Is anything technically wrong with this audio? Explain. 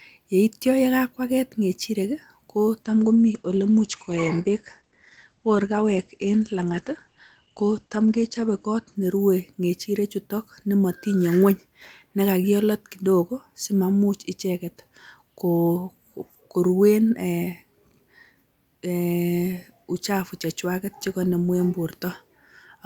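Yes. From 2.89 to 9.01 s there is a call bitrate drop: the encoder's rate fell from 64 to 12 kbps, coarsening the coding and cutting audio bandwidth from 20 kHz to 8 kHz, so the speech sounds muffled and watery. Unlike packet loss, there are no gaps, and clarity returns before "ne rue ng'echirechutok nemotinye".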